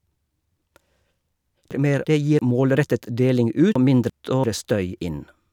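A speech clip with chunks out of order twice, from 1.71 to 2.39 s and from 3.76 to 4.44 s. Each time, a 341 ms chunk plays one chunk late, swapping two segments and leaving hard joins. Unlike a dropout or repeat, no sound is missing or duplicated; it is only jumbled.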